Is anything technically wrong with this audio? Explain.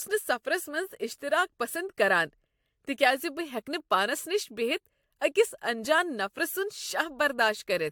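Yes. Generation loss runs throughout this speech. The sound is swirly, smeared and hollow, with blurred attacks and nothing above 18.8 kHz. The likely cause is repeated lossy AAC encoding, a few passes, each on a fresh frame grid, stacking noise and spectral holes.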